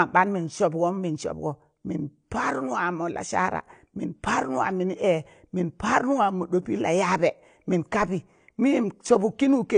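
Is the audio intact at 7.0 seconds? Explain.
No. At 7.0 seconds, as throughout the clip, the speech carries plainly audible AAC compression damage, likely from low-bitrate AAC-LC coding. Nothing is present above 9.8 kHz, so the top octave is missing and the sound is dull. The encoder quantised each frame's spectrum coarsely, which smears transients and leaves a warbling, fizzy texture on sibilants and held sounds. The amount of damage suggests a bitrate around 32 kbps.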